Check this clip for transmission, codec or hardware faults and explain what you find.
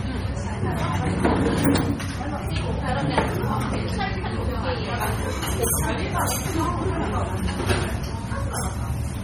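One codec fault runs through the whole clip. MP3 compression is audible from start to finish, with heavy damage that likely comes from a very low bitrate, one that fits about 32 kbps. At that rate the encoder has too few bits. It removes the treble above a fixed cutoff and drops weak frequency lines, which then flicker in and out from frame to frame. The sound comes across as dull, watery and swirling, with metallic chirps on bright content and smeared attacks.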